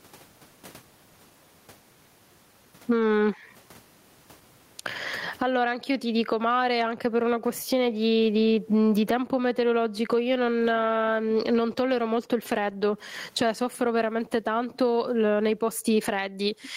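Gain was likely set too high, so a fast limiter clamps every loud sound, causing gain pumping throughout: the gain swings by around 25 dB.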